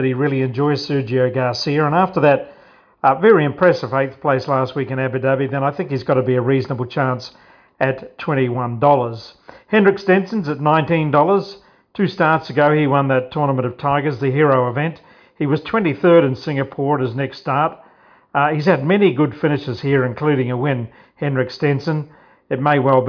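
No technical faults can be heard anywhere here.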